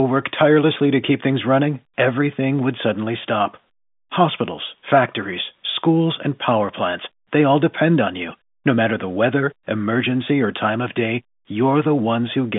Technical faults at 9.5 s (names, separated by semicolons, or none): none